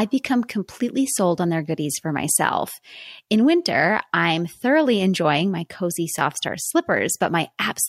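No technical faults occur at any point in this speech, so there is nothing to describe in time order.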